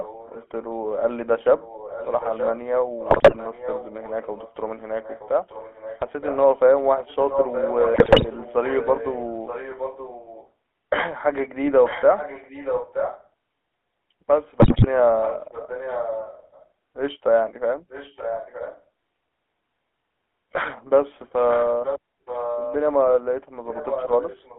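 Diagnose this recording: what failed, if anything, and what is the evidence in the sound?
A buzzy, gravelly roughness sits on the speech throughout, confined to a narrow band of about 250 Hz to 3.4 kHz. This is the GSM full-rate codec at 13 kbit/s. Its pulse-train excitation model coarsely rebuilds the voice, adding that grainy texture, and nothing above the telephone band survives.

A second copy of the speech trails the original by about 0.92 s at 0.0–0.47, 1.6–6.37, 6.99–10.5, 11.85–13.28, 15.22–16.63, 17.89–18.81, 21.48–22.76 and 23.68 s to the end. It is quiet at first and gets close to the direct level around 12–13 s. This is echo leak, likely from a far-end loudspeaker whose echo canceller let its microphone pickup return down the call.

Brief squawks, pops and gargling break up the voice at 3.10–3.37, 7.94–8.27 and 14.60–14.87 s. These are GSM bit errors from a weak radio link. 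Corrupted filter, pitch and gain parameters reached the decoder, which then distorted the spectrum and produced level spikes on the affected frames.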